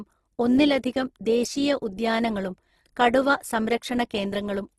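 The speech was likely passed through Opus compression, and the damage fits a low rate near 16 kbps in the codec's music mode: starved bands get refilled with folded or noise-like content, so throughout the clip voiced sounds turn grainy and rough, with nothing above 12.1 kHz.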